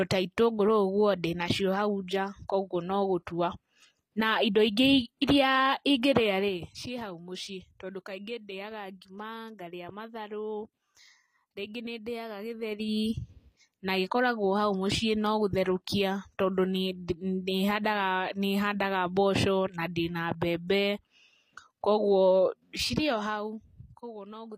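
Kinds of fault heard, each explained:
HE-AAC compression: The treble was likely rebuilt by spectral band replication, copying lower bands upward at a low bitrate, around 24 kbps. The speech's upper range sounds gritty and lispy, with harmonics misaligned, and nothing remains above 15.4 kHz.
Zipper noise: Gain moved in coarse steps of 3, 2 and 1 dB, about ten a second, without smoothing. Each jump clicks, so a zipping texture rides on the speech during level moves near 6.3, 12.5 and 22.9 s.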